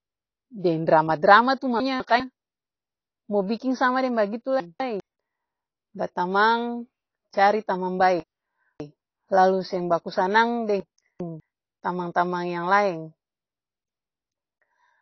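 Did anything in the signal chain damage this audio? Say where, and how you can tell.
Yes. Throughout, the audio sounds dull and smeared, with nothing above 6.5 kHz and plainly audible codec damage. Likely cause: low-bitrate AAC compression at the codec stage.

Chunks out of order appear at 1.8–2.2 s, 4.6–5.0 s (after "biking sama deng bagitu"), 8.2–9.0 s and 10.8–11.4 s. Each time, a 200 ms chunk plays one to three chunks late, leaving jumbled sound with hard joins. This points to the buffer stage.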